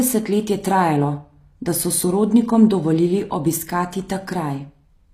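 From start to finish, the speech carries HE-AAC compression damage, and it is plainly audible. The treble sounds false. S sounds come out gritty and metallic. Nothing reaches above 15.5 kHz. The likely cause is a low-bitrate HE-AAC v2 encode, which fits roughly 24 kbps. The codec kept only the lower spectrum. It then rebuilt the top by copying lower bands upward under a coarse envelope, so the harmonics do not line up.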